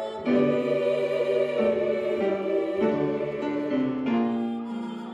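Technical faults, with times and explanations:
3.81 to 4.55 s, zipper noise. The level drops by about 10 dB here, but not smoothly. It falls in 1 dB steps, around ten a second. Each step is an instant jump in gain with no ramp between values. Every jump leaves a small click in the waveform. Strung together, the clicks form a fast ticking or zipping on top of the sound. It lasts only while the level is moving.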